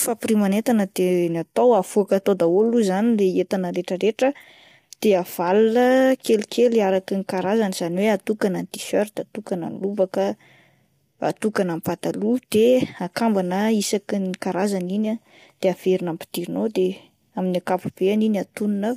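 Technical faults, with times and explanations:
Throughout, low-delay AAC compression: the speech has a rough, grainy texture, with a hiss-like fill between the pitch harmonics and a top band that sounds thin and synthetic. It likely comes from a low-delay AAC codec such as AAC-ELD at a low bitrate, which fits something near 32 kbps. At that bitrate the roughly 500 frequency lines of each frame are coded too coarsely, so noise fills the gaps between the voice's harmonics. That sets it apart from steady broadband noise or a plain low-pass cut.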